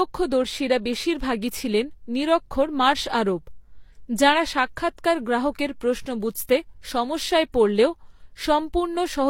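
From start to finish, the speech has likely been through transcoding between lossy codecs, apparently a Vorbis encode at a modest rate followed by a low-rate HE-AAC encode. The second encoder spends its limited bits reproducing the first one's artefacts while adding its own, so the two kinds of artefacts are heard stacked together across the whole clip. Nothing is present above 16.3 kHz, the lowest cut-off in the chain, which survives into the final result.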